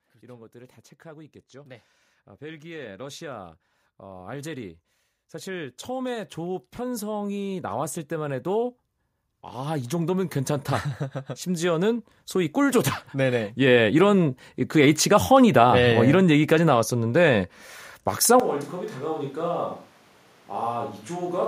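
A speech clip where automatic gain rising kicks in three times, from 0.05 to 4.77 s, 5.3 to 8.75 s and 11.26 to 14.58 s, with the voice and background swelling together by about 8, 8 and 6 dB as the gain control chases a quiet input. Then at 18.4 s the sound turns hollow and roomy right through to the end, likely a switch to a distant microphone, dropping roughly 10 dB with room noise sitting about 25 dB below the speech.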